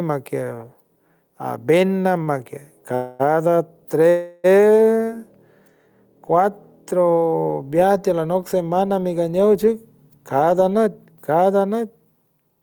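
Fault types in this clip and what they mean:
gain pumping: The speech level rises and falls with its own loudness throughout the clip, a swing of roughly 5 dB. The likely cause is input gain set far too high for the microphone, with a fast limiter or compressor pulling it back down on every peak. Loud and quiet passages end up close in level, so the speech sounds squashed.
short stall from a late packet: From 2.23 to 2.29 s the sound is briefly held where it should have moved on. The receiver's jitter buffer ran dry when a packet failed to arrive on time, so it stretched the last bit of audio by about 38 ms until the packet turned up, then resumed from the same point. Nothing is lost, but the held sound carries a faint buzzy or slightly dipped quality.
call audio freeze: Two freezes occur, from 2.95 to 3.21 s and from 4.09 to 4.46 s. Each one holds the last sound as a fading buzz or hiss for about 247 ms and 345 ms respectively, without falling fully silent. 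This is likely caused by packets delayed in transit emptying the jitter buffer, with the receiver filling the wait by extending the last sound. Playback then picks up where it stopped, so the speech is interrupted but not cut.
jitter buffer speed-up: After "semana mi ganow", from 9.67 s to the end, the speech runs at about 109% speed with its pitch unchanged, so it sounds hurried. The jitter buffer had accumulated more audio than its target, as happens when delayed packets arrive in a burst. To shed that excess delay, the receiver repeatedly cut out short pitch-period-length slices, removing around 0.3 s in total over this stretch.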